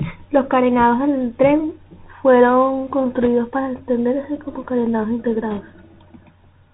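Throughout the clip the speech has passed through the Bluetooth CVSD headset codec, and the damage is plainly audible. The band stops at about 4 kHz, and the delta modulator's step size cannot follow fast, loud high-frequency movement. Sibilants come out scratchy and blunted, and a fine granular hiss sits beneath the speech. This is consistent with a 64 kbit/s one-bit-per-sample narrowband headset link.

Bit errors on a Bluetooth voice link appear twice. The first runs from 3.21 to 3.27 s, right after "carenados del tren fueron" and before "para extenderse como carenados". The second runs from 5.51 to 5.60 s, following "para extenderse como carenados". Each flipped bit nudges the decoded waveform by one step, whose size grows with the speech level, and the error fades out, so there are no sharp clicks. Instead, a rushing, crackly noise is laid over the speech, which suggests an error rate of around 2 percent.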